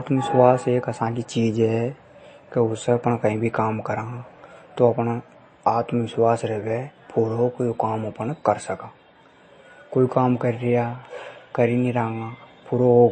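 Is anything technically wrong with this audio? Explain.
Yes. Throughout, the speech shows MP3 compression damage, plainly audible. Nothing remains above 8.3 kHz, so the treble sounds dull. Weak frequency lines drop in and out between frames, giving a watery, swirly texture. That points to a likely low bitrate, around 32 kbps.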